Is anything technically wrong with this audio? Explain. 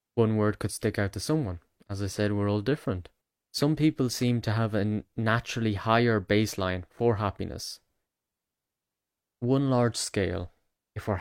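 No, nothing is technically wrong with this audio.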